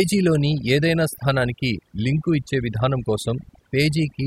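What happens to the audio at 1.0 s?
At 1.0 s the speech carries overdone noise removal, present throughout: bands near the noise estimate are pulled far down, leaving a lowered background that breaks up into twinkling, warbling specks.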